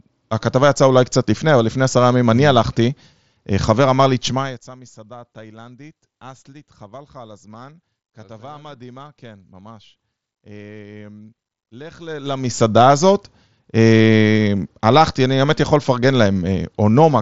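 From 11.94 to 12.62 s, a level change of roughly 25 dB is applied in coarse unsmoothed steps, about a hundred per second, producing zipper noise: each jump leaves a small click, so a fast ticking buzz rides on the speech, which is band-limited below 7.7 kHz by the mSBC headset link, while the level moves.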